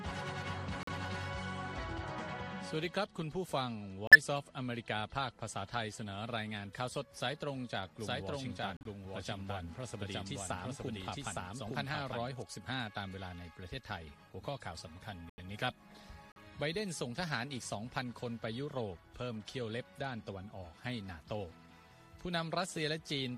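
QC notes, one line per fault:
0.83 to 16.37 s, corrupt frame muted: the sound drops to abrupt silence at 0.83–0.89 s, 4.07–4.16 s, 8.77–8.87 s, 15.28–15.39 s and 16.32–16.37 s. Each hole is 50 to 115 ms long. Damaged compressed frames were rejected by the decoder and replaced with silence, so each gap is a whole number of frames, consistent with frames a few tens of milliseconds long. Playback timing stays intact around each gap.
7.96 to 12.42 s, doubled audio track: a second full-band copy of the sound plays about one second behind the original and at roughly the same level. It has no decay or room colouring. It switches on and off abruptly at the edges of this span, which gives a clean, distinct repeat rather than a reverberant echo. The likely cause is the same signal being captured again over a slower path and mixed back in.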